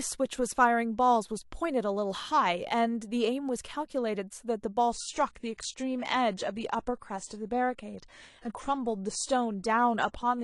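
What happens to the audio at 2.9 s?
Nothing goes wrong at 2.9 s; the audio runs through that moment intact, with no dropout, click, glitch or other fault.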